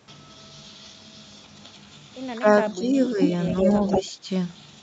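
A speech recording that shows speech suppressed in double talk from 2.35 s onward. The level dips briefly at 2.35 to 2.45 s and 2.74 to 2.96 s, by about 15 and 10 dB. Smaller dips of about 5 dB follow at 3.14 to 3.19 s and 3.63 to 4.29 s. These most likely come from an echo canceller that hears both ends at once and turns the near talker down with the far-end sound. An echo leak also appears. A delayed copy of the voice arrives 181 ms late, at 3.22 to 3.29 s and 3.50 to 4.02 s. The first scrap is about as loud as the speech. The second is a little quieter and overlaps the last dip. This is likely a loudspeaker echo the canceller failed to remove. Nothing is heard above 8 kHz, consistent with the Opus call path's bandwidth.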